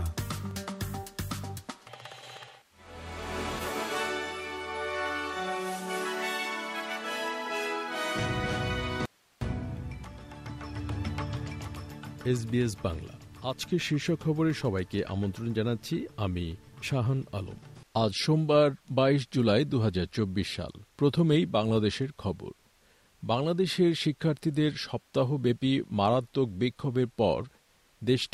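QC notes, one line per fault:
9.06–9.41 s, audio dropout to a faint residue: the signal feed likely broke while the downstream path stayed live, leaving 358 ms of hiss about 35 dB down, abruptly cut in and out.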